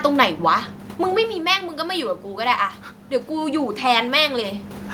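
A short speech recording in which automatic gain rising occurs between 3.27 and 4.59 s. The input level drops by about 9 dB, so the gain control judges the signal too quiet and lifts its gain by about 3 dB over those 1.3 seconds. Voice and room noise swell together. On a waveform the envelope, including the gaps between syllables, widens steadily. A spectrogram shows the background floor brightening across all frequencies at once, unlike the talker's movements near 1 s and 4.5 s, which change only the voice.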